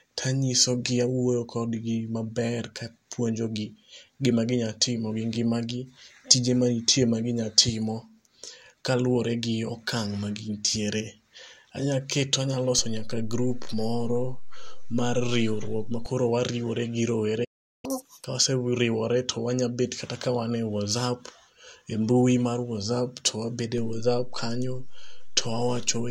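At 12.79 s there's a DC step: the waveform's zero line suddenly jumps to an offset, which you hear as a low thump while the speech carries on unaffected. That offset sits there until 16.06 s. It's the same kind of jolt you'd get from a converter recalibrating or an input with an offset being switched in, and the speech itself isn't disturbed.

Then at 17.44 s the audio just cuts out mid-flow and stays silent for about 0.39 s, until 17.85 s. That's a playback stall, likely the player running dry of data or its thread getting blocked, so nothing reached the output until it recovered.

Right after that, from 17.85 to 18.24 s, comes the catch-up at higher speed. The player runs its backlog at double speed to claw back the lost time, and because it does that by resampling, the pitch jumps up by roughly ten semitones as well, so the speech briefly sounds squeaky and rushed. It settles back to normal speed and pitch at 18.24 s.

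At 23.78 s there's another DC step, the same low thump as the baseline shifts. This time the offset never steps back and holds right through to the end.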